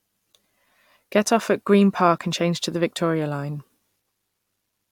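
Speech, with nothing technically wrong to report.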